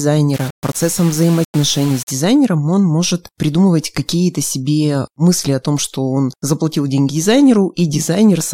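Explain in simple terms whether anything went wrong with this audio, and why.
Low bit depth without dither, 0.34 to 2.11 s, before "он может придумывать": the speech turns gritty, likely from rounding to very few levels.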